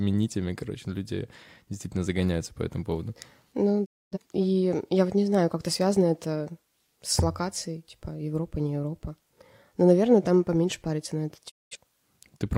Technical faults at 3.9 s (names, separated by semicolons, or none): digital broadcast dropout